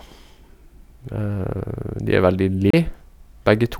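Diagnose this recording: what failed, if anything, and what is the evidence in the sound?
CD skip at 2.70 to 2.74 s, just after "er veldig", at the playback stage. The speech drops into a brief mute of roughly 30 ms, and then resumes from a different point in the recording rather than where it left off. A knock or a surface flaw threw the laser onto another turn of the disc's spiral, so the player silenced its output while it regained tracking and then continued reading from the wrong place.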